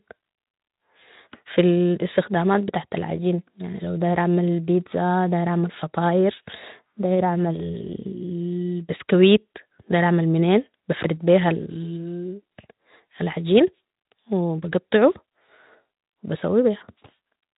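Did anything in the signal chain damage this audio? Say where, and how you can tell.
No, nothing in the chain damaged this speech; the only processing audible is a Speex codec working as intended, with a band limit near 3.8 kHz and the light coding texture of a setting around 15 kbps.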